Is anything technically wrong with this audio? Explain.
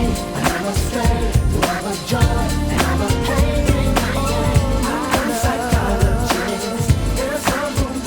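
Yes. Three clicks at 5.05, 5.89 and 6.75 seconds are likely caused by dropped samples. Each time, a tiny stretch of the stream, roughly a third of a millisecond, goes missing. The waveform then leaps from one value straight to a later one. The gap is far too short to remove any audible sound. What you hear is the discontinuity itself: a single sharp click that shows up as a thin vertical line running across the spectrum.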